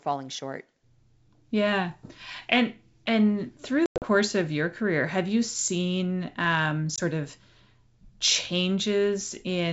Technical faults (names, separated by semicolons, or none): packet loss on an ADPCM call